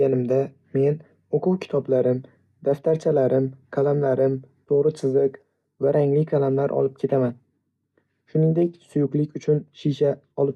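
No technical faults are audible.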